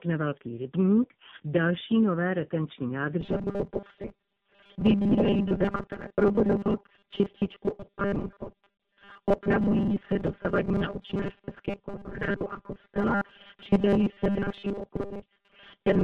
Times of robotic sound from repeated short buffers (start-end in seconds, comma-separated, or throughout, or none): 3.21-16.03